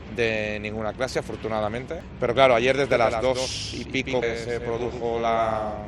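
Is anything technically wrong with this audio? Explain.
Yes, there are two kinds of technical fault.

At 2.00 s and again at 4.22 s there is damaged data in a compressed stream. Corrupted bytes make the decoder misread a frame and lose sync. It hunts for the next frame header. Each event is a brief chirp or blip.

From 2.91 s to the end there is a doubled audio track. A second full-band copy follows around 150 ms behind, about 5 dB quieter. It is likely a second capture through a slower path. It starts abruptly and has no decay or room colour.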